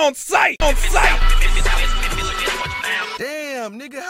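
From 0.62 s to 2.62 s a second, identical copy of the sound plays alongside the first, trailing it by roughly 0.7 s and at about the same loudness. It cuts in and drops out abruptly, with no fade, decay or added room tone. This doubled audio track is likely the result of the signal being captured a second time through a slower path, or of an edit leaving two misaligned copies layered together.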